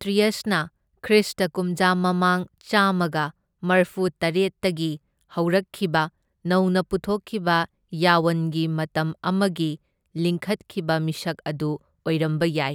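No technical faults can be heard anywhere in the recording.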